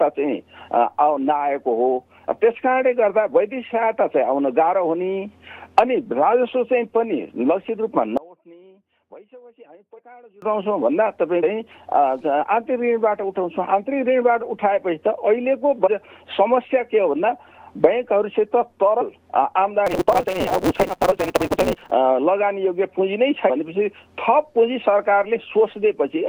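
Between 8.17 and 10.42 s the audio drops by about 26 dB and turns faint, with only a small residue left. That is the signature of one channel inverted, likely heard through a mono sum where the material common to both channels cancels. It differs from a simple dropout or gain fault because a faint residue remains rather than silence or an evenly quieter copy. Compressed frames skipped shows up as short forward jumps at 9.98, 11.42, 15.86, 19.00 and 23.49 s. Each one discards a fraction of a second of material, roughly 0.1 to 0.2 s. Nothing goes silent at these points; the audio just leaps ahead. From 19.86 to 21.91 s a steady 188 Hz buzz sits over the sound, and the audio runs 1.88 times too fast while its timbre stays. This is a block size mismatch (truncated), where each block's tail is thrown away, which fits a downstream stage reading 256 samples of every longer block. A resampling or clock error would raise pitch along with speed, and the periodic buzz at the block rate is what marks this fault instead.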